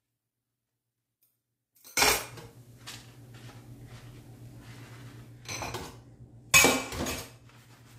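From the start to 1.97 s the sound collapses, dropping by about 29 dB to a faint remnant. That's most likely one channel inverted: with one side's polarity flipped, everything common to both channels cancels in the mono sum, leaving only the difference.

At 2.16 s there's a digital radio blend to analogue. The receiver cross-fades over 272 ms to the FM broadcast, so level jumps about 3 dB and hiss sits roughly 40 dB down until it returns at 5.50 s.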